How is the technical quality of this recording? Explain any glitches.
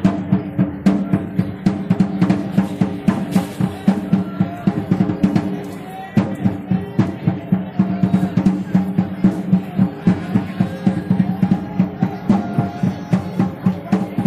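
No technical faults are audible.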